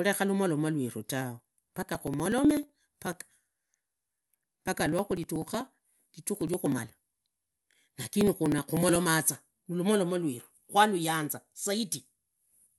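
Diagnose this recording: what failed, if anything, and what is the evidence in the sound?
The failure sits at the driver or buffer stage: periodic USB or driver dropouts. Starting at 1.39 s, just after "lumoromu lweru tawe", and continuing to 8.96 s, something stalls the audio path every 0.062 s, about sixteen times a second. Each stall drops a couple of milliseconds of samples outright rather than filling with silence, so the speech carries a steady train of small ticks, audible only where sound is present.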